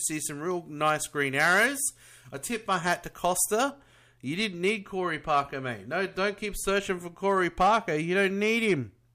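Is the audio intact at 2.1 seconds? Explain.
No. Pre-emphasis left on from 0.0 to 3.7 s: the treble boost, matching the CD 50/15 µs curve, was never undone, lifting 10 kHz about 8 dB, so the speech sounds thin and sibilant.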